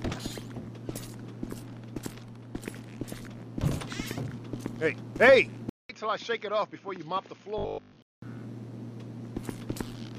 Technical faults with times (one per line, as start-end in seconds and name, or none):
5.69-8.22 input switched to a poorer device
7.58-7.98 robotic sound from repeated short buffers